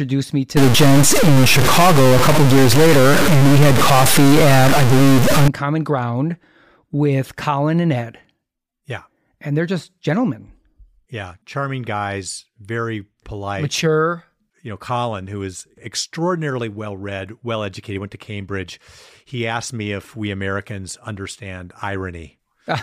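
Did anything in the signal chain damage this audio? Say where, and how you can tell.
Yes. A stuck bit runs from 0.57 to 5.48 s in this speech. Through that stretch the sound takes on a harsh, buzzy distortion, and the gaps between phrases fill with loud noise, since the stuck bit flips with the sign of small values. The offset is large, around -10 dBFS, which points to a high-order bit. The likely cause is a broken data line or fault at the converter, forcing one bit constant.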